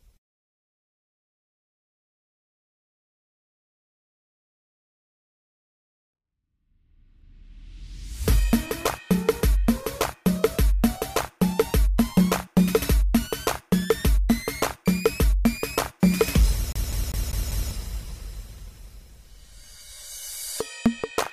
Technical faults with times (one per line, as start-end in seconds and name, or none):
16.72-17.71 CD stuck on one turn